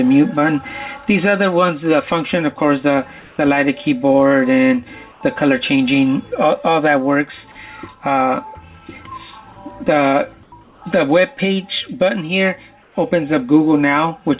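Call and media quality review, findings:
Comfort noise in place of the background, five short gaps: 3.20–3.38 s, 5.12–5.21 s, 10.43–10.52 s, 10.64–10.82 s, 12.83–12.95 s. Likely cause: sender-side discontinuous transmission with receiver-generated noise. Background, about 28–35 dB below the loud passages, drops into flat, textureless hiss for 90–180 ms. Level steady in the first gap, about 4–5 dB quieter in the rest. Band-limited to 4 kHz throughout, which fits a G.711 call path.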